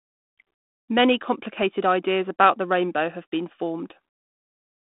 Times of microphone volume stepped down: none

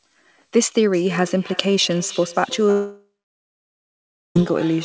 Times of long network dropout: 2.71-4.36

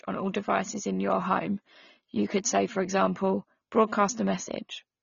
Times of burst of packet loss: none

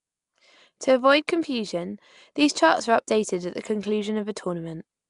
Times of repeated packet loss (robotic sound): none

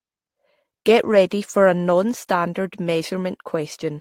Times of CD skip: none

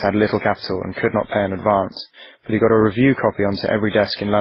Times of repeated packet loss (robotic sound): none

